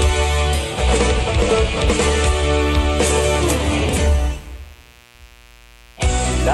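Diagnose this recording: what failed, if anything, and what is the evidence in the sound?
The fault is mains buzz in the analogue wiring, from 4.08 s to the end of the clip, sitting around 30 dB below the wanted sound. A dimmer, rectifier or unshielded run injects sharp switching spikes twice per 60 Hz cycle, producing a raspy buzz rich in 60 Hz harmonics. On a spectrogram, evenly spaced horizontal lines at multiples of 60 Hz begin at 4.08 s and climb to several kHz. A zoomed waveform shows spikes repeating 120 times per second.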